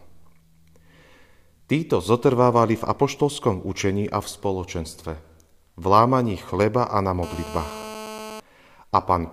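Just after "chleba a na", from 7.23 to 8.40 s, a GSM phone buzz appears: a 2G handset transmits in 217 Hz bursts that the audio circuit rectifies. Steady and raspy, about 14 dB under the speech, its harmonic-rich 217 Hz rasp differs from smooth mains hum.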